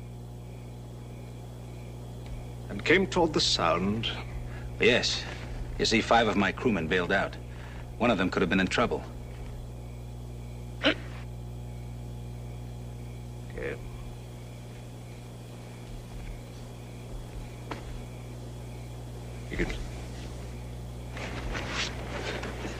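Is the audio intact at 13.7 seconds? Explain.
No, mains hum runs through the whole clip, 13.7 s included: a steady 60 Hz tone from power-line coupling, fairly loud, roughly 10 dB under the signal.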